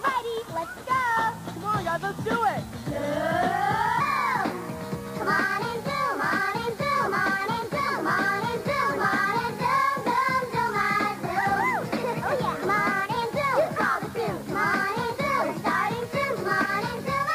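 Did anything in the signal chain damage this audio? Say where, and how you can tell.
Yes. From 4.00 s to the end, the section at the wrong speed runs 1.2 times too fast, with pitch raised about three semitones, so timing and pitch shift together. This likely comes at the editing or playback stage, where the section was clocked against the wrong rate.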